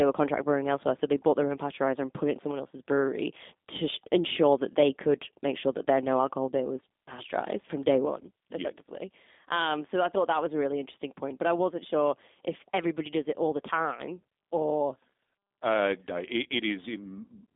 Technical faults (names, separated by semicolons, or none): G.729 codec